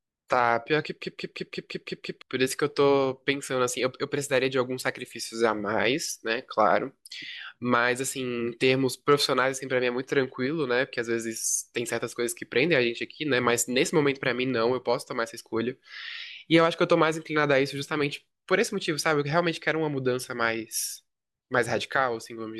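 A system hang loop runs from 1.02 to 2.22 s. The driver stalled while the hardware kept replaying its ring buffer, so one 171 ms slice of speech repeats seven times at 5.86 Hz as a machine-gun stutter. This fits an 8192-sample buffer, and about a second of audio is lost.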